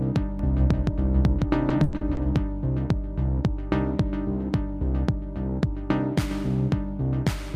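A recording of everyday sounds, with two overlapping faults. From 0.39 s to 2.37 s there is a doubled audio track. A second, full-band copy trails the original by roughly 150 ms. It sits about 5 dB lower. It has no room colour or decay, and it starts and stops abruptly. The likely cause is a second capture through a slower path mixed back in. Inside that stretch, from 1.69 s to 2.19 s, repeated packet loss gives a choppy, robotic sound. Four holes fall close together, the longest lasting 100 ms. About a third of this half-second is patched by stretching the last sound. Some 170 ms is filled that way, and another 160 ms is simply missing.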